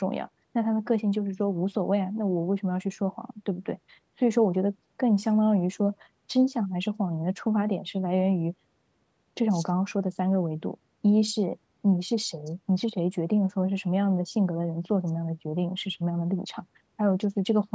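Nothing goes wrong in this speech; it just carries the usual marks of call microphone processing, with the lowest bass trimmed away and nothing above 8 kHz.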